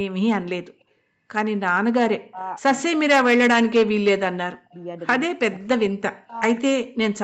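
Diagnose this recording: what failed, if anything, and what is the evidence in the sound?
Speech suppressed in double talk, call processing stage: the speech drops by up to about 40 dB at 2.27–2.42, 2.79–3.2, 3.5–4.22, 4.46–4.75, 5.27–5.85, 6.24–6.34 and 6.6–6.96 s. The likely cause is an echo canceller that could not separate the near talker from loudspeaker echo, so it attenuated both.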